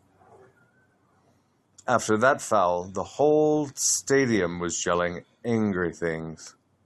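No technical faults are audible.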